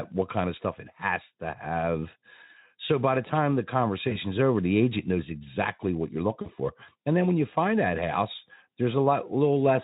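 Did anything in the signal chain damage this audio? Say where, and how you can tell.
Yes. The damage happened on the network path: VoIP packet loss concealed by the speech codec, at 4.09 to 4.18 s and 6.42 to 6.51 s. About 20 ms and 40 ms went missing, which fits one and then two lost frames. The decoder filled each gap by repeating its last pitch and filter at falling gain, and it needed a short while to recover after packets returned. On a spectrogram the harmonics run flat and fade through each gap instead of following the speech. The Speex coding carrying the call shows only light wear around this.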